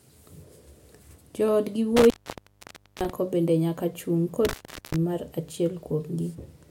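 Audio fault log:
1.97–3.10 s and 4.45–4.96 s, intermittent contact: the speech cuts out for about 0.91 s, then about 0.39 s, as a loose connection opens. Crackle at each break and a faint hiss through the gap mark a physical contact fault rather than a clean digital dropout.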